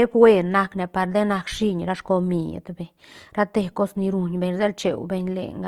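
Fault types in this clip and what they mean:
Opus compression: The speech carries a plainly audible rough, grainy texture across the whole clip, with tonal parts turned noisy, yet the band stays full, reaching up to about 20.2 kHz without dropouts. That points to a low-bitrate codec that keeps every band's energy and fills gaps with folded or noise content, likely Opus in its music (CELT) mode at around 24 kbps, rather than MP3, whose spectral holes would swirl.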